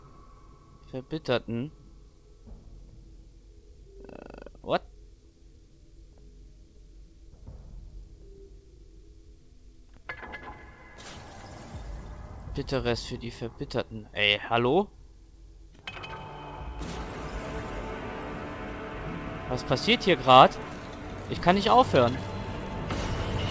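Nothing here sounds wrong: the audio comes through a call connection, with the band stopping at about 8 kHz as you'd expect from a wideband codec such as G.722, and no glitches or dropouts turn up along the way.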